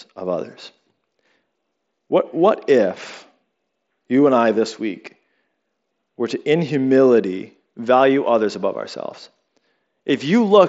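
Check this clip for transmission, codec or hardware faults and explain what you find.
No faults found; the speech runs through a wideband Bluetooth headset path with mSBC coding, nothing above about 7.7 kHz and only light codec graininess.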